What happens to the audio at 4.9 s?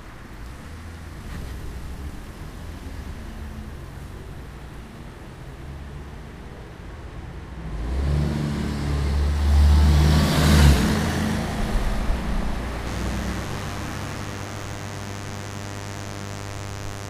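Nothing goes wrong at 4.9 s: the sound carries on intact, with no dropout, click, distortion or other fault at that point.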